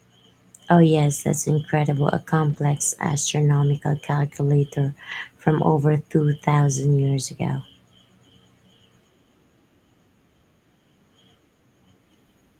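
At 2.49–2.59 s, just before "astronomical calculator from over", a lost packet rebuilt from error correction leaves no gap, but about 60 ms of speech turns rough and noisy, consistent with three packets lost. The same happens at 5.11 s, between "astronomical calculator" and "from over", and at 6.33–6.35 s, after "astronomical calculator from over", each about 20 ms, as if a single packet was lost. Each time the decoder played the low-bitrate copy carried in the following packet. On a spectrogram these spans look smeared and grainy, with the harmonics less sharply defined. The waveform stays continuous, with no dropout.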